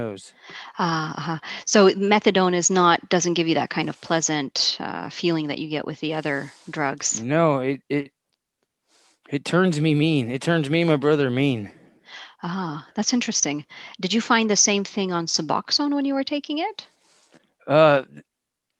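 No technical faults are audible.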